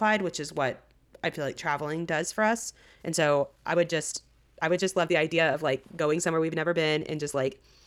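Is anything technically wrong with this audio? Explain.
Yes. From 2.13 s to the end of the clip, the speech suddenly rushes ahead at roughly one and a half times its earlier pace (about 1.48×), yet its pitch stays unchanged, and the delivery sounds rushed. This is a time-stretched section, likely the result of software squeezing the audio into a shorter span while holding pitch steady by discarding short slices of the waveform and butting the remaining pieces together.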